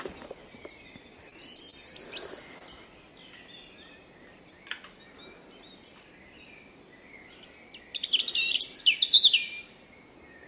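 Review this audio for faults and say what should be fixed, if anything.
Repeated packet loss (robotic sound) from 1.29 to 1.74 s: packets arrived late or not at all four times in under half a second, with the longest hole about 21 ms. Each hole was patched by extending the preceding audio, so about 15% of that span is synthetic and the sound turns choppy. A deeper or adaptive jitter buffer, plus forward error correction or redundancy on the link, would prevent this.

Short concealed packet loss at 2.58 to 2.62 s: roughly 20 ms of audio missed the decoder, and the receiver bridged it by continuing the last sound before blending back in. This leaves a brief smear or wobble, and a short transient there can disappear. Redundant packet transmission or a slightly larger jitter buffer would avoid this.

The band stops at 4 kHz, which fits G.711 A-law at 64 kbps on the call path.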